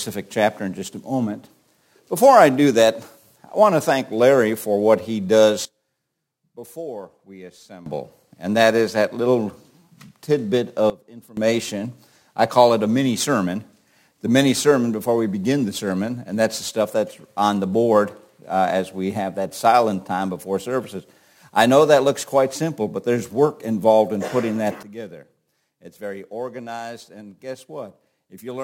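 At 5.65 s the level drops abruptly by about 18 dB until 7.86 s, again by about 17 dB from 10.90 to 11.37 s, and by about 15 dB from 24.83 s to the end. Background noise steps with the sound each time, pointing to a sudden gain jump, likely a digital gain change applied with no ramp.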